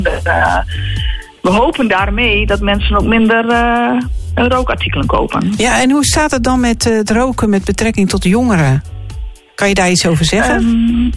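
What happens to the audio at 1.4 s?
Nothing goes wrong at 1.4 s; the audio there plays through intact, with no dropout, click or distortion.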